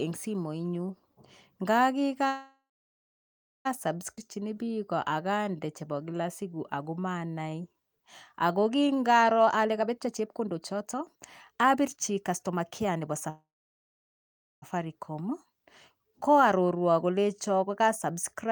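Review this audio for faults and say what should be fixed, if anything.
The sound halts at 2.27 s and again at 13.30 s, each time as a brief fading buzz and then about 1.05 s and 1.18 s of near-silence. It resumes intact at 3.67 s and 14.64 s. This is a call audio freeze, likely from packets held up until the jitter buffer ran empty. A waveform shows the envelope decaying into a flat stretch; a spectrogram shows smeared harmonics fading to blank.

At 4.15 s playback skips ahead. Roughly one second of audio is gone, and the two sides are joined by a gap of under 20 ms. On a waveform this is an abrupt seam with no pause. A spectrogram shows formant tracks breaking discontinuously.

From 4.19 to 8.05 s a jitter buffer slow-down plays the audio at 90% speed, adding 379 ms. From 8.47 to 9.37 s it runs at 87%, adding 119 ms. Repeated pitch periods stretch the sounds without lowering pitch. Spectrogram harmonics stay level but lengthen.

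A jitter buffer speed-up runs from 9.41 to 13.29 s at 121% speed, trimming roughly 0.7 s, and from 17.24 to 18.46 s at 105%, trimming about 70 ms. Pitch periods are cut out repeatedly, so the audio sounds hurried at unchanged pitch. Segments and pauses look compressed in time on both the waveform and the spectrogram.

To prevent these faults, stabilise the network path and give the jitter buffer a steadier, adequately sized target delay so it neither starves nor overflows.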